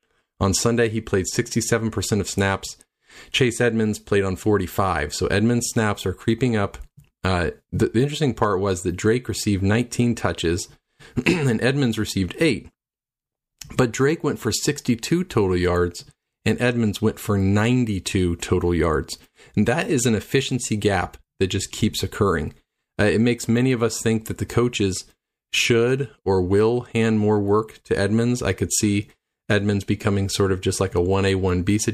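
No technical faults can be heard at any point in this speech recording, so there is nothing to describe in time order.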